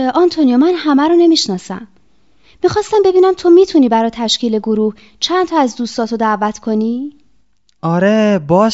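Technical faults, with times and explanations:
There are no technical faults to list for this clip.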